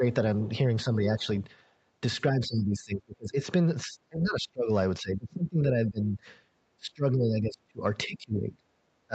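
Speech here, and it keeps ducking in and out: dips at 0.0, 0.84–1.27, 2.3–3.39, 3.84–4.7, 5.0–6.22, 6.77–7.83, 8.06–8.65 and 9.07 s to the end. The first two are shallow, around 5 dB, while the rest sink by some 25 to 30 dB. The likely cause is speech suppressed in double talk, with the echo canceller unable to tell this talker from the far-end echo and turning both down. The band tops out at 8 kHz, consistent with a wideband call codec.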